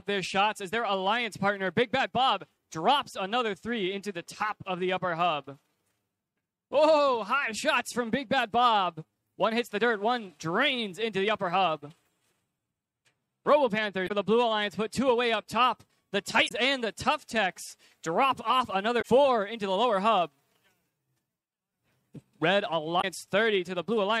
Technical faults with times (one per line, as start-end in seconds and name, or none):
14.04-14.11 damaged data in a compressed stream
16.45-16.51 damaged data in a compressed stream
18.98-19.05 damaged data in a compressed stream
22.98-23.05 damaged data in a compressed stream